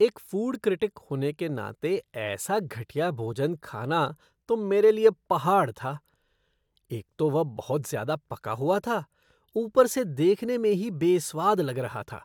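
No technical faults can be heard anywhere in the recording. Nothing in the speech audio calls for a timestamp or a closer look.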